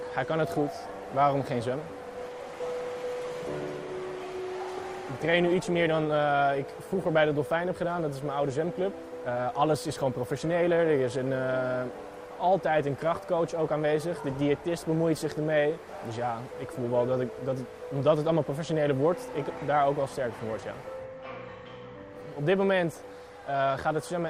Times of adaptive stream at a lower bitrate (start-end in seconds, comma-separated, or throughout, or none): 2.90-10.90